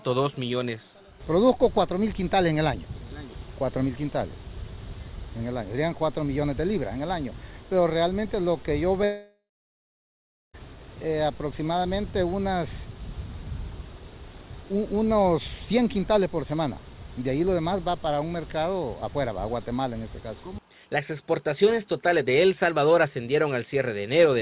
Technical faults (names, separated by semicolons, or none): long network dropout